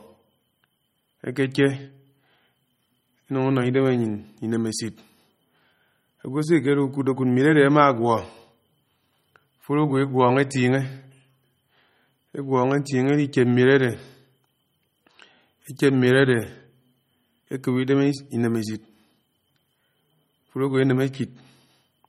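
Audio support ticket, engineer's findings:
Watery, swirly speech with smeared attacks throughout; treble stops at 15.8 kHz. Likely MP3 compression, bits starved, fits roughly 32 kbps; weak frequency lines dropping frame to frame.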